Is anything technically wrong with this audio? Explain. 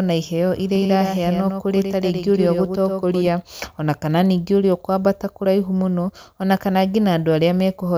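Yes. From 0.75 to 3.27 s there is a doubled audio track: a full-band copy trails about a tenth of a second behind, a few dB quieter, likely from a second, slower capture path. Unlike echo, it has no decay or room colour and starts and stops abruptly.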